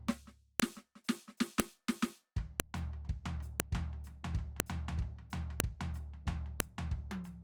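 A sharp, loud click cuts through the music at 0.60, 1.60, 2.60, 3.60, 4.60, 5.60 and 6.60 s, one snap per second regardless of what the music is doing at that moment. This is a file header played as audio: the stream was assembled from one-second WAV pieces joined without stripping their headers, so each piece's few dozen header bytes are read as sample values, producing a brief burst of nonsense at every seam.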